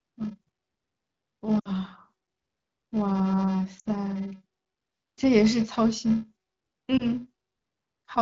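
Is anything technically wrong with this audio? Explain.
Yes, there are two faults.

Throughout, a filter restarted on every block forgets its state and begins each block from silence, so every block starts with a small transient. This gives a steady buzz at 375 Hz, which fits a 128-sample buffer. It rises and falls with the signal's level, unlike a lost frame's warble, which is irregular and tied to the speech itself.

Lost AMR speech frames occur at 1.60 to 1.70 s, 3.79 to 3.88 s and around 6.97 to 7.03 s. In each case the decoder reused its last good pitch and vocal tract settings with falling gain. The first two gaps cover about 60 ms, which points to three frames each. There the speech drops to near silence within two frames before recovering a little rough. The last gap, about 20 ms, is a brief dip or warble. A plain dropout would cut off abruptly or click instead of stretching and fading.

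The wideband AMR coding underneath adds only light codec colour.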